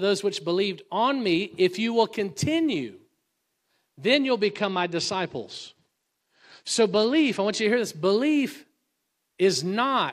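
After "then you'll", from 4.44 to 7.65 s, a Bluetooth SBC bit pool drop dulls the treble and adds grit. The sound fits a pool cut from 31 to 12, near 88 kbps. It recovers before "to hear this belief".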